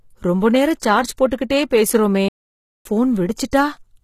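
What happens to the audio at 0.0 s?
From 0.0 s the speech carries plainly audible codec damage, and it runs through the whole clip. The treble stays bright but sounds synthetic, and s sounds come out gritty and metallic. The likely cause is HE-AAC compression at a low bitrate, around 20 kbps. Only the lower band is really coded. The treble is rebuilt by copying lower bands upward, so its harmonics don't line up with the real ones.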